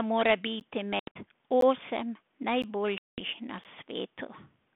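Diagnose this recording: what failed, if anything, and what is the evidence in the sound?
In the playback or buffering stage, audio is being delivered in chunks of about 1.0 s with a small delay at each join, a gap between chunks. The result is four hard-edged holes of about 13 ms, at 0.60, 1.61, 2.62 and 3.64 s, spaced about one chunk apart.

On the network side of this 32 kbit/s G.726 call, packet loss on an ADPCM call leaves holes that the decoder fills with silence. Between 0.99 and 1.17 s about 120 ms is missing, scattered over 160 ms with a longest run of 80 ms. From 2.98 to 3.22 s about 200 ms is gone, which points to around seven and around ten lost packets. Afterwards the decoder's predictor and step size no longer match the sender's, so the sound comes back slightly distorted before it settles.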